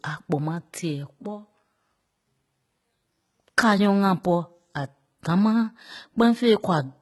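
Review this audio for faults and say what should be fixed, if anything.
Throughout, s sounds are gritty and lispy, with the treble copied up from lower bands so the harmonics don't line up, likely HE-AAC compression, which fits about 16 kbps. Give it a higher bitrate or a codec that codes the full band directly so the treble isn't synthesized.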